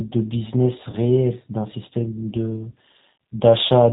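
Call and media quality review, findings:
G.729 codec damage, whole clip, plainly audible. Speech band-limited, nothing above 4 kHz, dull and muffled. Rough, slightly synthetic texture. Probable component: VoIP encoder, sound consistent with G.729A near 8 kbit/s. Mechanism: speech rebuilt per 10 ms frame from a vocal tract filter, pitch predictor and a few pulses, so fine waveform detail is lost.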